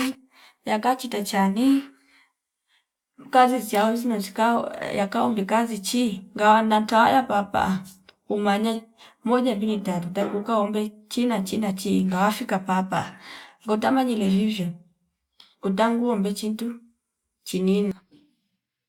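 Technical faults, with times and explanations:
No technical faults can be heard anywhere in the recording. Nothing in the speech needs a time or an explanation.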